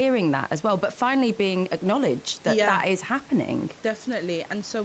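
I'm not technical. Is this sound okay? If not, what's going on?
Yes, this speech sounds fine, just like a normal call with a little quiet room background, and nothing in it has gone wrong.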